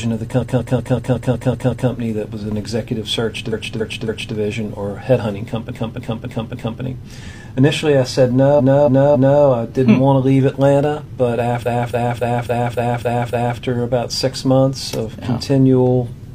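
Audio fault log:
0.38–1.86 s, 3.49–4.32 s, 5.67–6.78 s, 8.55–9.38 s, 11.61–13.56 s: repeated frames. The same short block replays in a stutter: 186 ms eight extra times in the first run, then 279 ms blocks three, four, three and seven times.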